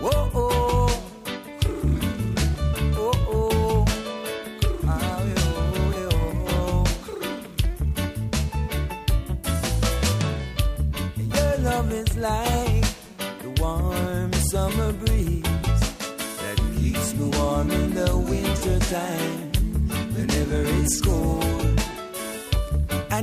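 No technical faults are audible anywhere in the recording.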